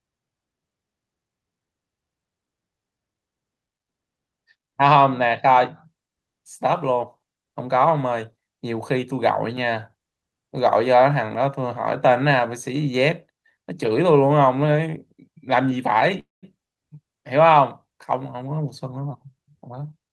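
A speech recording carried over a call link, with the top end limited to around 12 kHz by the Opus codec. From 16.19 to 16.45 s the sound stalls, the last moment trailing off into roughly 180 ms of silence before resuming where it stopped, a call audio freeze likely caused by delayed packets emptying the jitter buffer. From 18.34 s to 20.07 s the speech runs hurried at about 110% speed with unchanged pitch, a jitter buffer speed-up trimming about a fifth of a second of pitch periods to reduce accumulated delay.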